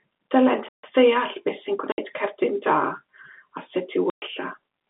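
At 0.69 s the speech just stops for about 150 ms until 0.83 s, then picks up again. That's a playback stall, most likely the player starving for data. The G.711 telephone band, capped below 4 kHz, carries on as normal around it. Then there's packet loss filled with silence: hard-edged holes at 1.92 to 1.98 s (60 ms) and 4.10 to 4.22 s (120 ms), which fits 20 ms packets dropping out.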